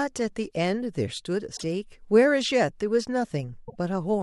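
At 1.56 to 1.64 s and again at 3.67 to 3.75 s the speech skips forward, and each time roughly 80 ms of garbled output follows, heard as a chirp, a noise burst or a brief dropout. That span is about three frames of 26.1 ms, which points to a broken MP3 bit reservoir as the likely cause. Frames were lost, so the frames after each cut reached back for borrowed data and decoded bytes belonging to other frames instead.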